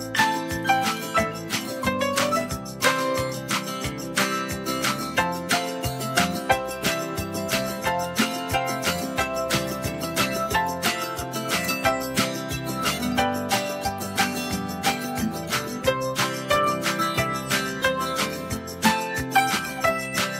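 No technical faults are audible.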